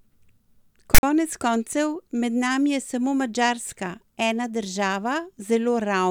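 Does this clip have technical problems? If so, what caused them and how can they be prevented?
Yes. At 0.95 to 1.03 s the speech is cut by file tags played as audio. A text metadata block was read as samples. It gives a harsh, lopsided rasp, then dead silence from zero padding, with hard edges. Prevent it by having the decoder skip tag blocks instead of treating them as audio.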